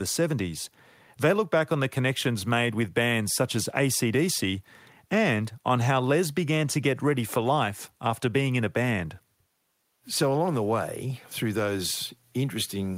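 No technical faults can be heard anywhere in the recording. The speech runs without any break, glitch or audible processing problem.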